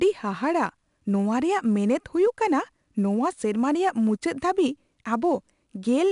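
From start to finish the speech carries the signature of 4-bit ADPCM compression. Each sample has been coded as a coarse 4-bit step from a predicted value, so the quantisation error rides along with the signal as a gritty hiss that swells on louder syllables, plainly audible here. Sharp onsets distort where the adaptive step size lags behind. The band stops near 10.6 kHz, which fits a sample rate around 22 kHz and a data rate near 89 kbps.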